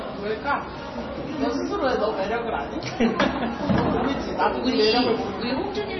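Throughout, nothing reaches above 5.9 kHz, and the sound swirls and warbles heavily. This is likely MP3 compression, fitting a very low bitrate near 24 kbps.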